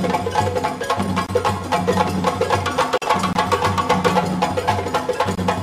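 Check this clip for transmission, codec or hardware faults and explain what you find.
There is one fault, a gap between chunks, at 1.26, 3.33 and 5.35 s. Each join in 2-second chunks leaves about 23 ms of silence. It is heard as short holes and shows as clean vertical blank strips on a spectrogram and flat lines in the waveform.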